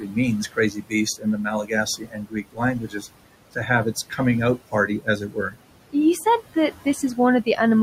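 Noise suppressor artifacts run through the whole of this speech recording: the suppressor pulls the room noise, which sits about 15 dB below the talker, down by about 18 dB frame by frame, so the residue sinks between the words and swells under them. Speech cut by the noise suppressor occurs at 0.00 to 0.17 s, 0.52 to 0.93 s, 1.63 to 3.04 s and 4.71 to 5.55 s, where the suppressor mistakes quiet speech for background and turns it down with the noise. The drops reach about 9, 17, 18 and 14 dB, and the dimmed stretches total roughly 150 ms, 200 ms, a full second and 300 ms, so endings and soft consonants there sound swallowed.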